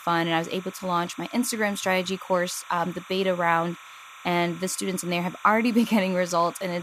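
Linear timecode running at what sounds like 30 frames per second is leaking from a neighbouring track or cable into the speech for the whole clip. This timecode bleed adds a chirping warble that flips between pitches around 1 kHz and 2 kHz, sitting roughly 20 dB beneath the voice.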